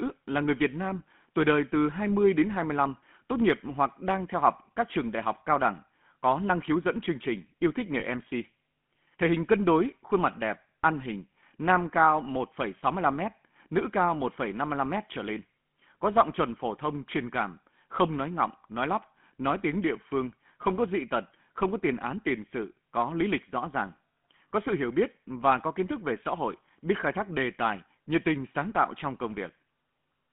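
From start to finish the speech carries the buzzy, gravelly roughness of the GSM full-rate codec. It models the vocal tract and excites it with a coarse, regularly spaced pulse train, discarding most of the fine detail of the excitation, and the damage is plainly audible. The line passes only about 150 Hz to 3.4 kHz, which fits a 13 kbps full-rate channel. On a spectrogram, energy stops sharply near 3.4 kHz, and harmonics look smeared and grainy rather than cleanly striped.

At 8.00 to 8.03 s, right after "chương trình yêu thích", there is a brief burst of lost GSM frames. For about 20 ms, which fits a single missing frame, the decoder repeated the last good frame's settings instead of producing fresh sound. This is heard as a short, metallic, ringing smear rather than a gap. On the waveform, the envelope shows a repetitive, periodic texture. On the spectrogram, a thin vertical strip appears with frozen, blurred spectral content.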